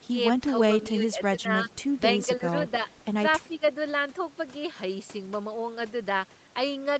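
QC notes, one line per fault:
0.00–0.04 s and 3.54–3.68 s, echo leak: a faint ghost of the talker trails the direct sound by about 317 ms. It is only a brief scrap at the very start, around 40 dB down, and a slightly stronger one near 3.6 s, around 35 dB down. The likely cause is a loudspeaker at the far end whose echo canceller let part of the returned signal through, so a delayed copy was sent back into the call.
0.08–0.13 s, 0.95–1.70 s, 2.27–2.43 s and 3.48–3.62 s, speech suppressed in double talk: the level sags in short dips, roughly 10 dB in the brief ones and nearer 15 dB across the longer 0.95–1.70 s stretch, where a few hundred milliseconds are turned down. This likely comes from both sides talking at once, with the echo canceller treating the talker as echo and pulling them down, which fits the echo leak overlapping the dip near 3.5 s.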